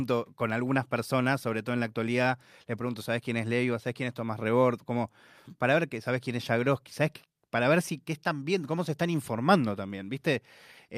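Nothing stood out as a technical problem on listening to this speech recording.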